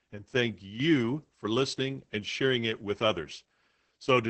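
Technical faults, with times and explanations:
Throughout, Opus voice compression: the speech is heavily damaged, sounding muffled, hoarse and faintly robotic, with nothing above 8 kHz. This fits the SILK linear-prediction mode at about 10 kbps, where the band is narrowed to wideband and the excitation is coded coarsely.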